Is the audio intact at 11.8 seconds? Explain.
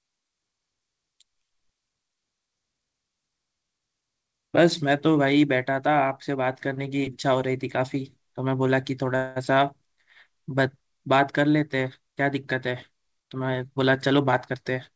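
Yes, the speech at 11.8 seconds comes through intact, carried cleanly by the WebRTC call path with its G.722 coding and nothing above 8 kHz.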